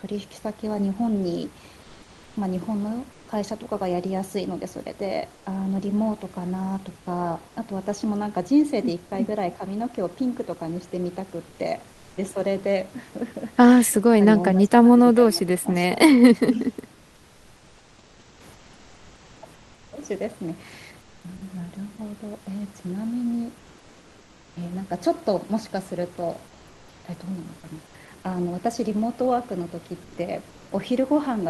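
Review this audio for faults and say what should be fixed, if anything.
Comfort noise in place of the background shows up at 1.82–3.28, 5.34–5.46, 7.48–7.56, 16.94–21.24, 23.58–24.56, 26.47–27.94 and 30.04–30.71 s. The room noise in pauses turns flat and featureless, up to about 2 dB quieter, likely from Opus DTX. Turning DTX off fixes it.

Speech suppressed in double talk hits at 13.89–14.13, 14.41–15.73 and 16.45–16.72 s, with dips of roughly 20 to 25 dB. The echo canceller likely ducks the talker while the far end speaks. Better double-talk detection or a less aggressive suppressor would prevent it.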